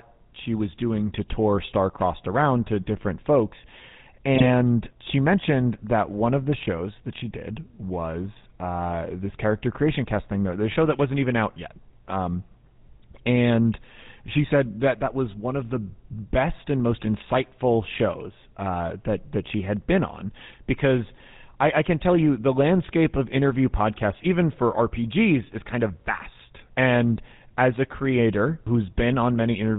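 From the start the speech carries the GSM full-rate codec's buzzy, gravelly roughness, and nothing survives above 4 kHz, which fits the 13 kbps full-rate coder. Its regular-pulse excitation, keeping only a third of the samples, leaves the damage plainly audible throughout.

At 4.35 to 4.47 s, just before "she mentioned that one", GSM bit errors hit: corrupted filter, pitch and gain values garble a handful of frames, so the speech briefly squawks and gargles with sudden level jumps.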